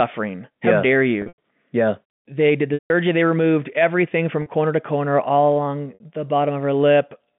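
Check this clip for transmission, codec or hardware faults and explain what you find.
Four gaps of packet loss with pitch repetition occur over the G.711 telephone-band line: 1.22 to 1.38 s, 2.74 to 2.90 s, 4.42 to 4.46 s, and 5.94 to 6.00 s. The receiver loops the last pitch period to fill each hole. The 40 and 60 ms gaps sound like a briefly held buzz. The longer ones fade toward silence before the speech cross-fades back. Unlike a plain dropout, the short gaps hum instead of going dead.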